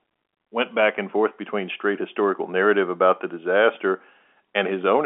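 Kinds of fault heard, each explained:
No faults heard in this clip.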